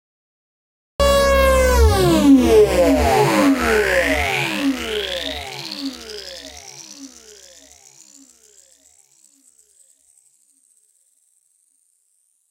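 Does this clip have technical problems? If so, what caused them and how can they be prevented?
Yes, there is a cut-off start: digital silence runs from 0 to 1.0 s, then the sound appears already in progress at 1.0 s, with no attack or rise. Capture began late. Unlike a dropout, nothing was audible before the gap, and unlike a slow fade-in, the level jumps straight to full. Start recording with some lead time before the sound begins so that its onset is captured.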